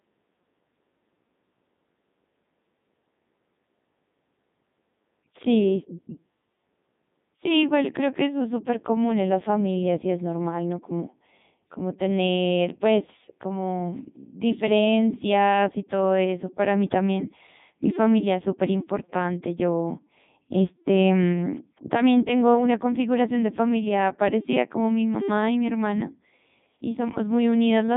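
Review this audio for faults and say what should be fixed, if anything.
Throughout the clip the speech shows heavy Codec 2 vocoder damage. The decoder rebuilds the voice from sine waves using only pitch, voicing and envelope, so it sounds robotic and buzzy, which fits the 3.2 kbit/s mode. On a spectrogram, neat synthetic harmonics sit within 150 Hz–3.7 kHz, with nothing above 3.8 kHz. Route the audio through a higher-bitrate waveform codec rather than a low-rate vocoder.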